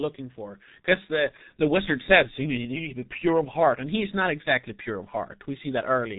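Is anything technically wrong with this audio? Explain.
Yes. G.723.1 codec damage runs throughout: its long frames and slowly updated voice model, consistent with roughly 6 kbit/s, blur consonants and leave the speech hoarse and muffled, with nothing above 3.8 kHz.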